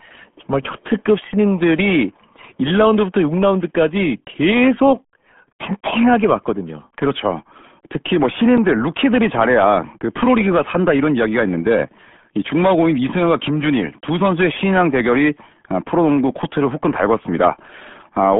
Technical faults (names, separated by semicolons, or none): RealAudio 14.4 codec